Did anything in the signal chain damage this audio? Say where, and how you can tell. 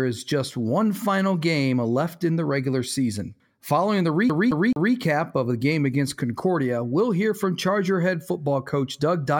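Yes. A CD stuck on one turn, at playback, runs from 4.29 to 4.94 s, just before "of the game against". The same 216 ms of speech repeats three times with a brief mute at each jump, as a scratch throws the laser back one track per revolution.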